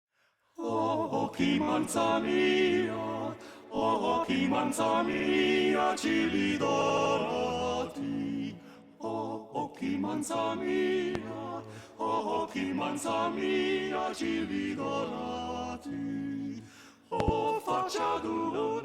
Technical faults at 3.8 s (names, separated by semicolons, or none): repeated frames